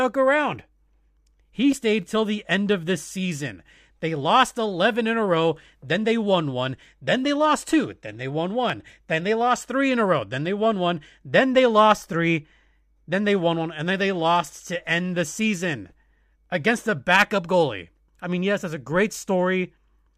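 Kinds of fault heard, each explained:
Dropped samples: The speech carries two isolated sharp clicks, at about 1.72 s and 8.70 s, each a single instant with nothing audibly missing around it. The likely cause is a fraction of a millisecond of samples vanishing from the stream, so the waveform jumps straight to a later value. Unlike a dropout, no stretch of sound goes silent, and unlike crackle, the clicks don't recur in a dense, irregular scatter.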